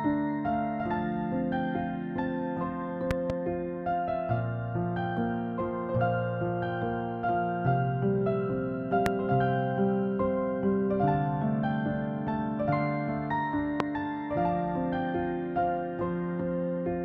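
Four loud pops sit on top of the audio, which continues underneath: a double pop at 3.11 to 3.32 s, about 15 dB above the signal, then single pops at 9.06 to 9.09 s and 13.80 to 13.83 s, each about 20 dB up. The likely cause is a voltage step from a plug, switch or static discharge.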